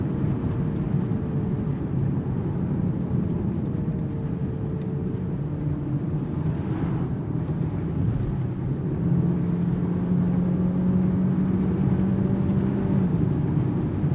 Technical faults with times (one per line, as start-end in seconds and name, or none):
none